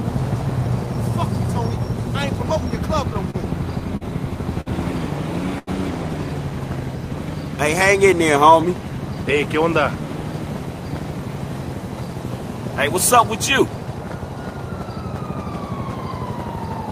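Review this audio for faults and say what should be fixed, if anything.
Repeated stalls (stutter) from 3.13 to 4.68 s: the jitter buffer ran dry five times, and about 148 ms was filled by extending prior sound, longest gap 52 ms. A short stall from a late packet at 5.58 to 5.69 s: an 86 ms delay jump emptied the buffer, so the last sound was held 86 ms before resuming intact. To prevent both, enlarge or adapt the jitter buffer target and reduce network delay variation on the path.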